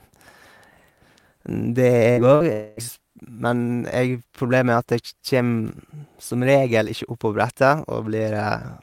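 It's a speech clip with a faint rough hiss riding on it the whole way through. That's sample clock jitter: the converter's clock wobbles by around a microsecond and a half, so the timing errors bite hardest on loud, bright passages and sit roughly 40 dB below the signal. Around the two-second mark there are two quick bursts of packet loss, at 2.11 to 2.20 s and 2.35 to 2.43 s. Each drops about 60 ms of audio, which the receiver papers over by stretching the last bit of sound and fading it, so you get a brief fading fill and then a skip ahead. Right after, from 2.52 to 2.80 s, about 240 ms goes missing, most likely a longer network dropout. The concealment fills the whole stretch with a drawn-out, fading continuation rather than dropping to silence, and the speech picks up again past the lost chunk.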